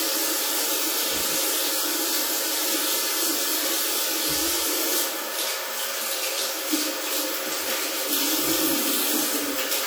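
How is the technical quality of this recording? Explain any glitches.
The technical quality is limited by plainly audible codec damage that runs through the whole recording. WMA compression is the likely cause. Throughout, the sound has a ringing, washy character with a hiss that swells and fades along with the signal. A transform encoder with long blocks smears quantisation noise across tens of milliseconds, and at a low rate, consistent with roughly 48 kbps in an early WMA encoder, weak components drop out entirely. Steady background hiss would not pulse with the material this way, and short-block codecs such as MP3 give sharper pre-echo rather than this broad smearing.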